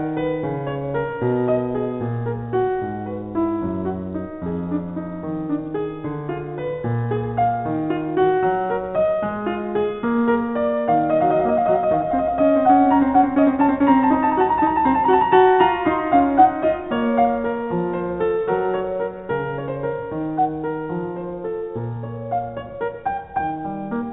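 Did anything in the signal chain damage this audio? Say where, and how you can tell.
No, nothing in the chain damaged this music; it came over a WebRTC call path that leaves nothing above 4 kHz, which fits a narrowband G.711 mu-law link at 64 kbps, and that ceiling is the call path working as designed.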